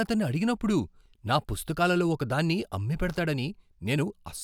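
No technical faults can be heard anywhere in the speech, so there are none to describe in time order.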